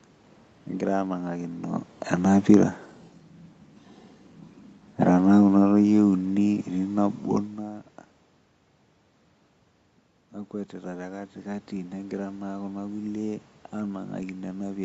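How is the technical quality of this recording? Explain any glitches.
The recording has two level glitches from the call's automatic gain control, heard against room noise and a call codec that leaves nothing above 8 kHz.

Automatic gain falling, 5.13 to 7.15 s: the gain control judged the input too loud, or its background noise too strong, and eased its gain down by about 4 dB, so speech and background sink together.

Automatic gain rising, 10.71 s to the end: after the input dropped by about 14 dB, the gain control slowly raised its gain, making speech and background swell together.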